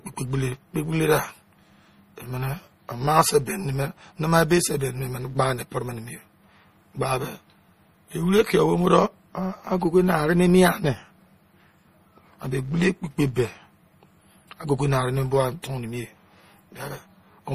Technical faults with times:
0.00-17.54 filter restarted on every block
0.00-17.54 MP3 compression
15.62 pre-echo

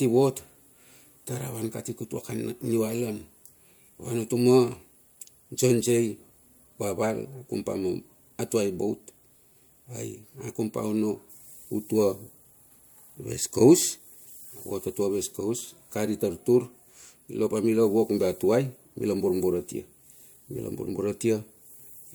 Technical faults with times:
none

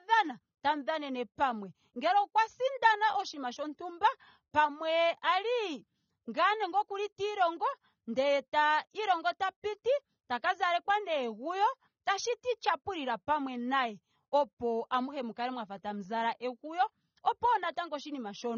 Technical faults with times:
0.00-18.57 AAC compression

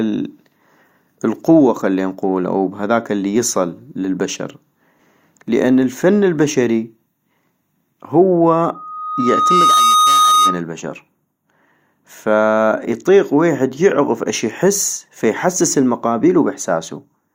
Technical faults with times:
4.99 overlap between stream segments
8.74-10.62 loudspeaker feedback squeal
10.98 overlap between stream segments

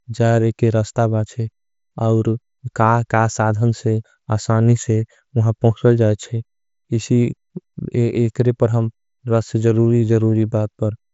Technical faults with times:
none

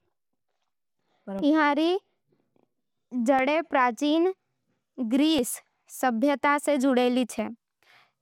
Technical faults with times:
0.39-7.39 periodic USB or driver dropouts

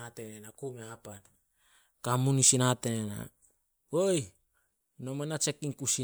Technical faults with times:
none

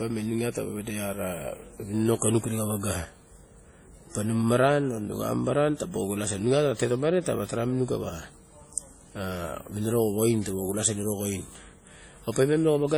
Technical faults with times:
0.00-12.98 transcoding between lossy codecs

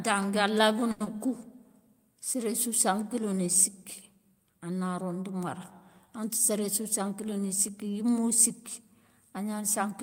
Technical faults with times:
0.91-1.02 short stall from a late packet
1.04-1.08 short concealed packet loss
6.50-7.86 jitter buffer speed-up

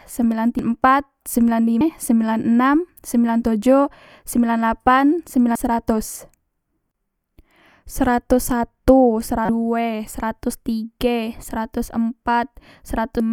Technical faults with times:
0.59 damaged data in a compressed stream
1.81 damaged data in a compressed stream
5.55 damaged data in a compressed stream
9.45-9.49 damaged data in a compressed stream
13.20 damaged data in a compressed stream

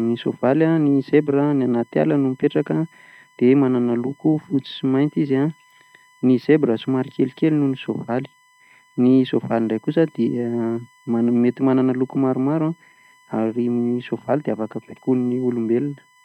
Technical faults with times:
0.00-16.24 USB whine

